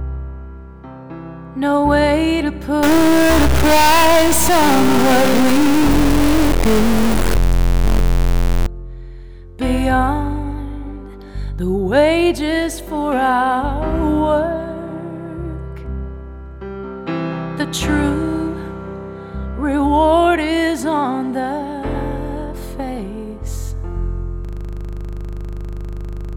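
From 2.83 to 8.66 s the audio turns distorted, and the quiet moments fill with noise. The likely cause is a stuck bit, one data line or converter bit held at a fixed value so that roughly half the samples are pushed off by that bit's weight. Unlike clipping, the grit also fills pauses, because flipping around zero turns near-silence into noise.

At 24.45 s the sound locks into a system hang loop that runs to the end of the clip. The machine stalled while the audio hardware kept replaying its ring buffer, so a single 40 ms slice repeats around 48 times, producing a rigid buzz at 25 Hz. Unlike a dropout or a skipping stutter, each repeat is identical and perfectly periodic, and nothing new ever gets through.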